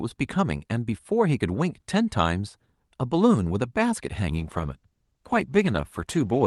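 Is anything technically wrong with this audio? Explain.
Yes. From 4.34 s to the end of the speech, the sound has a call bitrate drop. The network's bandwidth estimate fell, so the Opus encoder was told to spend far fewer bits and began coding coarsely. The change in quality fits a fall from 64 kbps to about 16 kbps. The speech turns rough and watery, and the top end narrows from the 12 kHz band heard earlier. Packet loss would cause brief gaps or robotic glitches. Here the sound stays continuous but degraded for the last 2.1 s, without recovering.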